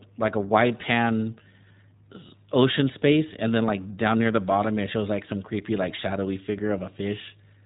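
From start to end the speech is carried by the iLBC codec, a narrowband VoIP coder that handles each 20 ms frame's excitation independently of the previous one. Everything above about 3.8 kHz is gone, so the sound is boxy and dull, and the coding damage is plainly audible as a rough, slightly synthetic quality. A spectrogram shows a hard ceiling near 3.8 kHz with empty space above, and the 15.2 kbps rate fits its coarse, grainy texture.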